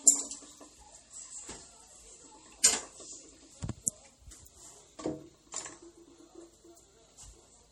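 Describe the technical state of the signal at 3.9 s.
Just before 3.9 s, at 3.86 s, a pre-echo appears: a hiss lasting about 13 ms that arrives ahead of the attack. The codec spread quantisation noise across the whole block, including the silence before the transient. Unlike reverb or a click, it comes before the event, not after it.

Across this moment, plainly audible MP3 compression leaves the sound watery and swirly. The damage fits a low bitrate of around 48 kbps, the likely cause. Weak frequency lines switch on and off between frames, so the flutter is uneven rather than a steady dulling like a simple low-pass filter.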